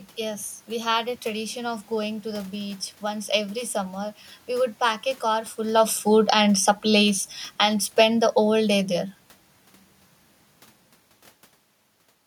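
Speech, with automatic gain falling from 5.59 to 8.92 s. The gain control treats the input as too loud or its background noise as too strong and pulls the level down by about 6 dB. Unlike the talker moving around 5.5 s and 11 s, which changes only the voice, this drop takes the room noise down too.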